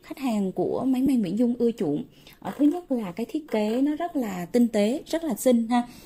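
At 1.06 s there is a brief smeared, noisy blip where the sound loses its clarity for a moment. This is lost LE Audio frames: about 7.5 ms went missing, which points to a single dropped LC3 frame, and the decoder filled the gap by replaying the previous spectrum with randomised signs.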